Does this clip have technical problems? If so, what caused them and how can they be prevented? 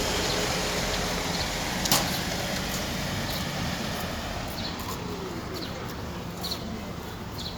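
No, no technical problems can be heard here.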